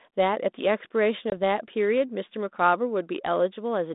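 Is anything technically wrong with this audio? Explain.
Yes. There is a packet loss on an ADPCM call at 1.30 to 1.35 s, in speech carried over G.726 at 32 kbit/s. About 20 ms of audio drops out, about one packet's worth. The gap is filled with silence and has hard edges. During the hole the receiving decoder's adaptive predictor and step size drift away from the sender's. So the speech comes back slightly distorted. It settles within some tens of milliseconds.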